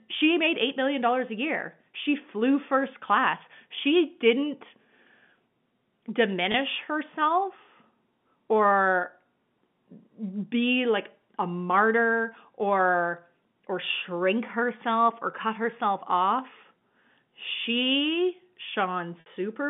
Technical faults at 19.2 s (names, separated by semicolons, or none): packet loss with pitch repetition